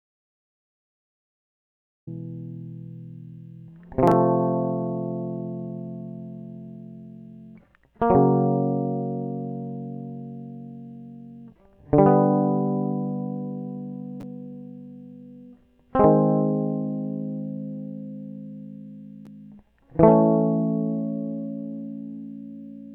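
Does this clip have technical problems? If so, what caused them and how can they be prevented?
Yes. The music opens in an audio dropout to silence that is already under way at the start, from 0.0 to 2.07 s. The gap holds silence with no room tone or hiss, unlike a quiet passage or a fade. The likely cause is a lost input, such as a disconnected cable, failed link or stray mute, while recording continued. Checking connections and mute states before pressing record prevents it.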